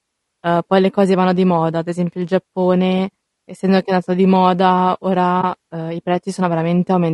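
Speech runs throughout with a rough, grainy texture: noise fills the gaps between the pitch harmonics and the top band sounds thin and somewhat synthetic. This is plainly audible codec damage, most likely from low-delay AAC compression (AAC-ELD). At low bitrates too few bits are left to code the spectrum cleanly, so noise creeps in between the harmonics. The degree of roughness fits a low bitrate around 32 kbps. At 5.41 to 5.44 s, between "è andato di moda" and "uhm i", there is AAC frame loss with muting. The decoder zeroed the missing spectrum, and the overlapping windows fade the signal down and back up, leaving a brief, soft-edged gap. The length of the hole fits a single lost frame of about 20 ms.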